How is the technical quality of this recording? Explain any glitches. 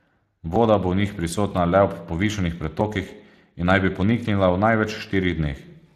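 The technical quality is limited by coding damage throughout, plus one glitch near the start.

Speex codec: Across the whole clip the speech has a grainy, hoarse texture, and the coding damage is plainly audible. Speex is a CELP codec that models speech as a synthesis filter driven by an excitation signal. At about 22.4 kbps there are too few bits to code that excitation cleanly, so the rebuilt signal carries a rough, noisy edge. Nothing is present above 15.4 kHz.

Dropped buffer (overrun): At 0.56 s, just before "bo v njih prisotna", there is a small forward jump in the sound and no gap of silence. A dropped buffer is the likely cause. The recording software did not read its samples in time, so the hardware overwrote them. Roughly 20 ms of audio was lost, and the two sides were spliced directly together.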